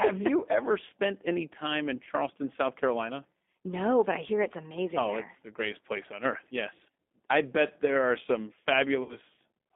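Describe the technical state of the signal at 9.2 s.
At 9.2 s the speech is still recovering from a stretched, fading stretch caused by VoIP packet loss concealed by the speech codec, from 9.03 to 9.17 s after "bet there are some". The decoder extrapolated across roughly six lost 10 ms frames, and its rebuilt state keeps the voice weak or distorted just after packets return.

Underneath, the speech is narrow, rough and slightly synthetic, confined to about 250 Hz to 3.6 kHz. This is G.729 codec damage, and it fits an 8 kbit/s pulse-based vocoder.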